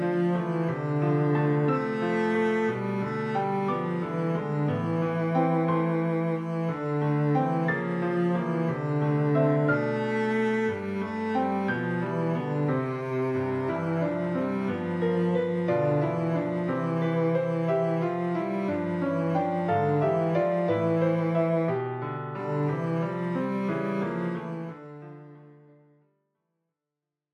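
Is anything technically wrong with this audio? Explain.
No, nothing is technically wrong with this audio.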